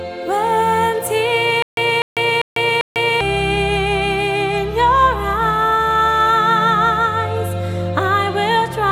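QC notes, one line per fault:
1.62–3.21 s, stutter with silent gaps: a 247 ms burst plays four times, each followed by 148 ms of digital silence, repeating evenly every 396 ms while the audio due in that span is lost. The likely cause is a stalled player or stream replaying its last fragment at each retry, then running empty. The waveform shows identical blocks between flat silent gaps, and the spectrogram shows one pattern copied across with blank vertical bands.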